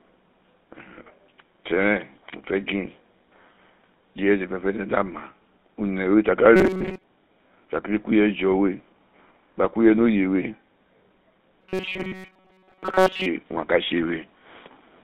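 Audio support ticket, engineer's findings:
GSM full-rate codec, throughout: buzzy, gravelly edge on the speech, clearly audible. Nothing above about 3.7 kHz and thin below 200 Hz, so narrowband phone-line bandwidth. Pulse-excitation model on a 13 kbps voice codec, with the excitation only coarsely kept, hence the grit riding on every voiced stretch.

Robotic sound from repeated short buffers, 6.56 to 7.04 s: rigid metallic buzz pitched at 188 Hz, speech contour still faintly traceable. Likely jitter-buffer underrun: player loops the last ~5.3 ms chunk while fresh audio is dropped, and that loop length sets the tone.

Robotic sound from repeated short buffers, 11.61 to 13.26 s: same 188 Hz buzz, longer stretch. Most of this span is repeated material rather than real audio. Likely the same buffer-starvation loop as the first one.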